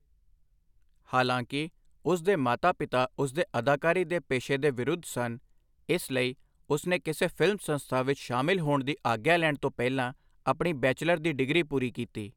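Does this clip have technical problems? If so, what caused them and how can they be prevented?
No, no technical faults heard.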